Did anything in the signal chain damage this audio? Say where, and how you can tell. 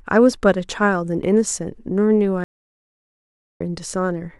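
Yes, a stream reconnect on the network side: the speech drops to silence from 2.44 to 3.61 s, then resumes about a second further on with a fresh decoder.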